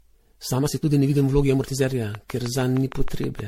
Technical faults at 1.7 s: generation loss; time-stretched section

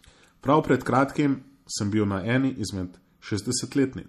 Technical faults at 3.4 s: MP3 compression

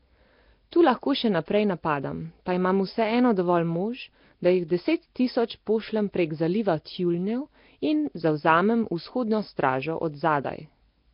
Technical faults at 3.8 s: Nellymoser compression

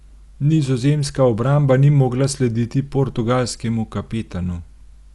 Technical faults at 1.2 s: Dolby Digital compression

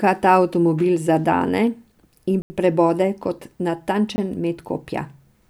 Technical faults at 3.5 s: none

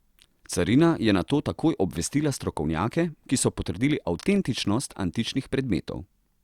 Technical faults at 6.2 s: none

